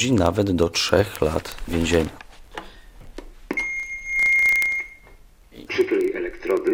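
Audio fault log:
0.13–6.73 s, word clock ticks: a steady run of sharp ticks, around 200 of them, coming roughly every 30 ms and varying in strength from one to the next. That pattern points to a digital link being read by a device on its own clock, not locked to the sender, with the two clocks off by something like 700 ppm. Each time they slip past each other, one sample gets dropped or repeated and a few neighbours are misread, which is what makes each tick.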